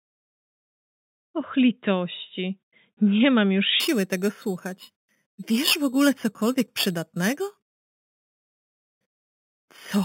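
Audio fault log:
3.80–10.05 s, imaging from sample-and-hold upsampling: samples repeated without smoothing, fitting 8 kHz audio raised to 48 kHz, leave mirrored spectrum copies starting at 4–8 kHz, a metallic fizz about 12 dB down that follows the level. Spectrogram shows flipped bands above 4 kHz; waveform shows staircase steps.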